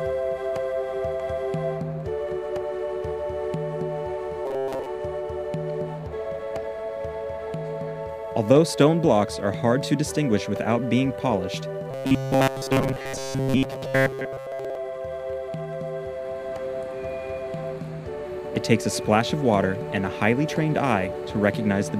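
Robotic sound from repeated short buffers at 4.46 to 4.86 s and 11.91 to 14.77 s: most of the audio is likely replaced by repeated 7.5 ms fragments, forcing a rigid, metallic 134 Hz buzz.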